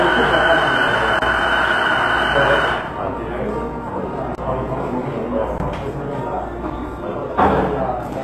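From the start and through the whole clip, the top end is plainly damaged in a way that points to HE-AAC compression, likely at a very low rate around 16 kbps. Nothing is present above 12.3 kHz, and the treble below that sounds synthesised rather than captured. High-frequency detail has been rebuilt by copying lower bands upward under a coarse envelope, so bright components come across grainy and metallic, with overtones that do not sit naturally on the lower spectrum.

Four blocks of digital silence interrupt the audio. They fall at 1.19 to 1.22 s (30 ms), 4.35 to 4.38 s (30 ms), 5.58 to 5.60 s (20 ms), and at 6.70 s (10 ms). In each case the sound cuts out to silence with no fade, consistent with an output buffer not being filled in time. The cutouts are abrupt, so the longer gaps register as brief holes, and the last one as a tick or dip.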